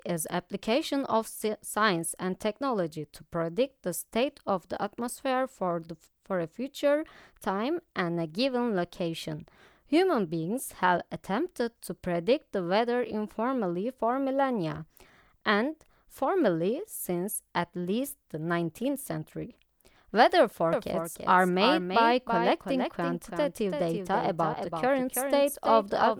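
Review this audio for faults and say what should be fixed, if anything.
Doubled audio track from 20.73 s to the end: a full-band copy of the speech enters abruptly, trailing roughly 300 ms behind and about 5 dB quieter, likely a second, slower capture path mixed in. To prevent it, route only one capture path to the mix and mute any duplicate or monitoring feed.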